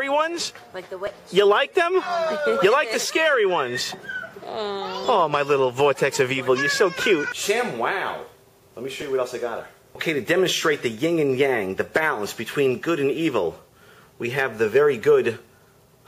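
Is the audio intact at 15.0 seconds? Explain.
No. At about 15.03 s an overlap between stream segments, at a 2-second segment boundary, trims a few milliseconds of real audio, so the waveform jumps abruptly, heard as a tiny skip. A spectrogram shows a thin vertical broadband line there.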